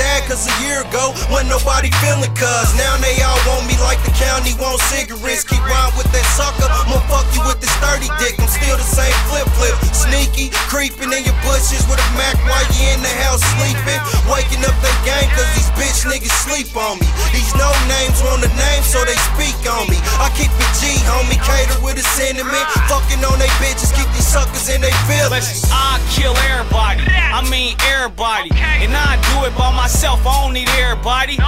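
No audible technical fault appears anywhere in this audio, and the signal stays steady and intact throughout.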